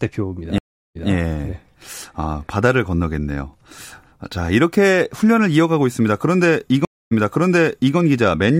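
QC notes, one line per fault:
0.58–1.12 s and 6.85–7.97 s, stream reconnect: the connection drops, we get about 370 ms then 260 ms of silence, and the player restarts its decoder mid-stream. The server resends a burst, so speech picks up 163 ms and then 859 ms earlier, repeating a bit.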